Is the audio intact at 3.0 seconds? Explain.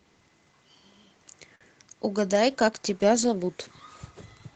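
No. At 3.0 s the speech sits inside a call bitrate drop running from about 2.32 to 4.35 s. The encoder's bit budget fell sharply, with the coarsest stretch lasting about 1.9 s, which fits a slide from roughly 32 kbps to about 14 kbps. Opus then coded the speech more crudely, so it sounds rough, watery or muffled. Unlike packet loss, there are no gaps, clicks or repeated fragments, just a continuous drop in quality.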